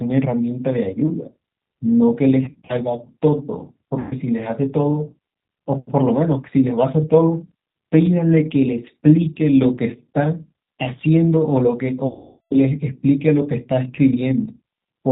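Throughout the recording the speech carries G.729 codec damage at 8 kbit/s: the voice is rebuilt from a vocal tract filter, a pitch predictor and a few pulses per frame, so it sounds plainly rough and synthetic. On a spectrogram nothing appears above 4 kHz, and the harmonics look smeared and grainy rather than cleanly striated.

VoIP packet loss concealed by the speech codec first appears from 2.45 to 2.74 s, where about 140 ms of audio is missing in short gaps scattered across roughly 240 ms, none longer than 40 ms. Each gap is filled by the decoder repeating its last pitch and filter, so the sound is briefly stretched and fades. A second gap from 3.99 to 4.15 s covers about 120 ms, and the loss amounts to six 20 ms packets. Here the sound stretches and fades. The longest gap runs from 12.07 to 12.55 s, about 440 ms. The extrapolated sound fades away, and the speech returns weak for a moment. 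On a spectrogram each gap shows flat, repeated harmonic bands that fade out, and the waveform's amplitude tapers rather than dropping cleanly to zero.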